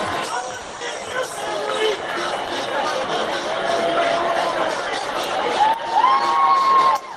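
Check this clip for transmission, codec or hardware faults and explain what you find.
Three transmission faults show up, all in the network path: two close together near the start and one near the end.

From 0.62 to 0.75 s the sound stalls into a fading buzz for about 110 ms, then resumes intact. This is a call audio freeze, likely from delayed packets draining the jitter buffer.

From 0.77 to 0.83 s a brief smear replaces the audio. This is short concealed packet loss: 80 ms never arrived, and 40 ms of extrapolated sound bridges the hole.

From 6.53 to 7.11 s the sound runs hurried but at unchanged pitch, about 8% fast. This is a jitter buffer speed-up, where repeated pitch-period cuts trim about 50 ms of excess delay.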